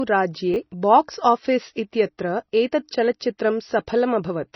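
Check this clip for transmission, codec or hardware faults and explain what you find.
Two faults are audible in this speech recording.

Chunks out of order, from 0.54 to 0.56 s: one 10 ms chunk arrived or was written late and plays after the chunk that should follow it. Nothing goes missing, but the sequence is swapped, producing a brief jumbled flicker.

MP3 compression, throughout: the sound is heavily band-limited, with nothing above 5.9 kHz, and has a watery, swirling texture where weak frequency detail drops in and out between frames. The likely cause is MP3 encoding at a bitrate around 24 kbps, starved of bits.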